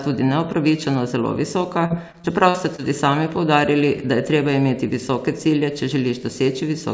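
From 1.86 to 2.80 s the speech turns choppy and robotic, with five brief holes, the longest about 45 ms. This is repeated packet loss: successive packets went missing, each hole was patched by stretching the preceding sound, and roughly 15% of that stretch is filled-in audio.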